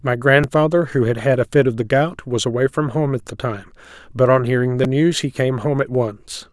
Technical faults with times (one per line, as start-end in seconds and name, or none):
0.43 repeated buffer
4.84 repeated buffer